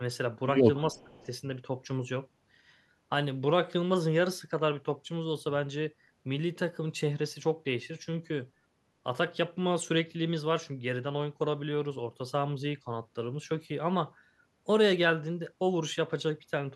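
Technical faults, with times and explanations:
0.93 to 1.21 s, speech suppressed in double talk: the speech dips sharply, by roughly 25 dB at its deepest, for around a fifth of a second in total within this span, then recovers. This is likely an echo canceller that could not separate the near talker from loudspeaker echo while both sides spoke at once, so it attenuated everything.
0.97 to 1.03 s and 1.21 to 1.26 s, echo leak: two brief, very faint scraps of a delayed copy of the speech surface, each lagging the original by 355 ms and sitting roughly 35 dB below it. The fixed lag and the low level point to residual loudspeaker pickup that the canceller failed to remove and sent back. A room reflection would arrive within tens of milliseconds and blend into the speech, not appear this late as separate fragments.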